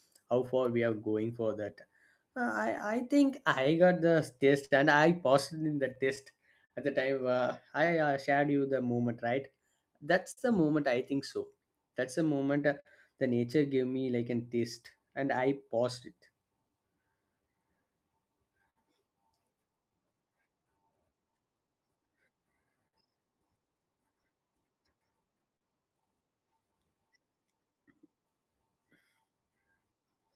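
Running through the whole clip there's clock drift between sender and receiver: the sender's clock is roughly 4% slow, so the receiver's jitter buffer keeps draining and the receiver has to stretch what it gets to keep going. You hear that as faint, uneven hitches in the speech.

Those show up as repeated timing corrections from 0.2 s to 30.15 s. The receiver keeps repeating small slices so that playback runs at about 98% speed, adding something like 0.7 s in total. The pacing feels slightly draggy and unsteady, with occasional tiny stutters.

On top of that there are scattered short gaps from 0.46 s to 25.63 s, around forty of them. Each hole gets patched by carrying the last bit of sound forward. The longest are around 50 ms, and together they cover about 0.7 s, so you get brief smears and ticks. Another small cluster of scattered short gaps falls between 29.0 s and 30.05 s, just a few very short patches of around 10 ms each, near the end.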